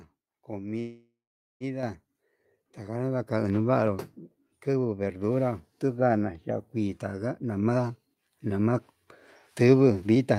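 A speech recording of about 10 s with several timing and level faults. From 0.79 to 1.63 s the sound stalls: the last sound is drawn out as a fading buzz, then about 0.45 s of silence, before speech resumes where it stopped, adding roughly 0.81 s of delay with nothing lost. This is likely a call audio freeze from packets held up in transit. On a waveform it shows as a decaying tail into a flat line, and on a spectrogram as smeared, fading harmonics followed by a blank gap. A microphone volume stepped up fault occurs at 1.83 s, raising speech and background together by about 5 dB, and again at 7.57 s by about 3 dB. Each appears as an abrupt, permanent widening of the waveform envelope with no ramp. From 2.83 to 3.02 s a jitter buffer slow-down stretches the audio to 86% speed by repeating pitch periods, adding 35 ms at unchanged pitch. A spectrogram shows lengthened harmonic segments at constant spacing. 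Jitter buffer speed-up runs from 7.69 to 8.75 s at 110% and from 9.61 to 10.35 s at 111%, each trimming about a tenth of a second of pitch periods. The speech sounds hurried, and a spectrogram shows compressed syllables with unchanged harmonic spacing.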